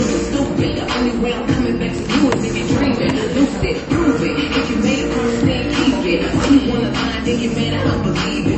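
Low-bitrate audio saved at a high bitrate runs through the whole clip: nothing is present above about 8.3 kHz, and the sound stays dull, with smeared, watery detail. This likely comes from a low-bitrate MP3 re-encoded at a much higher bitrate, which cannot restore what the first encoding discarded.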